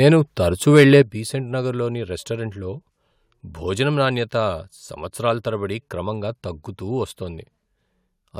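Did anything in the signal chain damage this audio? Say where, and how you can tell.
Yes. At the converter stage, the microphone overload was likely caused by an input volume set too high. From 0.75 to 1.01 s the speech peaks drive about 4 dB past full scale. A few percent of samples are flattened at the limit, giving the loudest syllables a harsh, crackling edge.

In call processing, the software likely reacted to that overload by stepping the microphone volume down. At 1.02 s the speech and background noise drop abruptly by about 9 dB. A second, smaller step of about 2 dB follows at 4.05 s.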